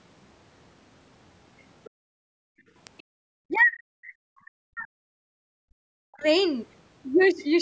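Right at 1.59 to 1.63 s and again at 1.85 to 1.9 s there are faint scraps of a second voice under the speech, very quiet at first, then a bit more noticeable. That's most likely the other side's voice leaking through, loudspeaker playback the echo canceller didn't fully scrub from the mic. A third scrap turns up at 2.97 to 3.03 s.

Straight after that second leak, from 1.9 to 2.73 s, the room tone sinks by about 40 dB and then comes back. That's the background gated by the echo canceller, clamping the mic while it thought the loudspeaker was active. It happens again, more briefly, from 3.03 to 3.2 s.

At 2.87 s there's a single sharp snap sitting on top of everything, likely an electrical switching spike from some nearby switch or discharge getting into the line.

From 3.48 to 6.25 s the talker's own speech keeps dipping hard, at its worst almost vanishing. The likely cause is speech suppressed in double talk: both sides spoke at once and the canceller turned everything down rather than sort out which was echo.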